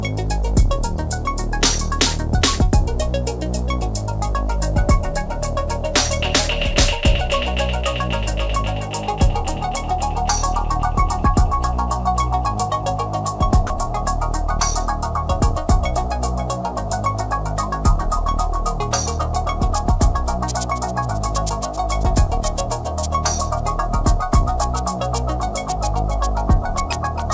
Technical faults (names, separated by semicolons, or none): sound dropped by the voice detector